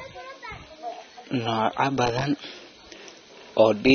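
From start to finish the speech sounds dull and smeared, with nothing above about 6.3 kHz, and the damage is plain to hear rather than subtle. That's most likely AAC compression, AAC-LC starved of bits: with too little data per frame the encoder drops the top of the spectrum and coarsens what's left. The cut-off and the amount of smearing point to a low bitrate, somewhere around 24 kbps.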